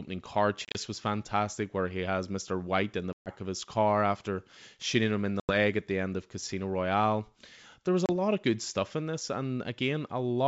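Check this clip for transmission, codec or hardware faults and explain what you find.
Four bursts of packet loss on an ADPCM call interrupt the G.722 wideband speech, whose coding itself leaves faint or no damage.

The bursts fall at 0.65–0.77 s (about 80 ms lost in scattered gaps, the longest 30 ms), at 3.13–3.31 s between "in the" and "of his car after", at 5.40–5.55 s between "after shooting him in" and "at the end of", and at 8.06–8.10 s between "was a" and "lot of good stuff". Lost packets become silence, and the ADPCM decoder's predictor and step size drift from the sender's. Speech therefore resumes slightly distorted before settling. On a waveform or spectrogram these show as hard-edged empty columns.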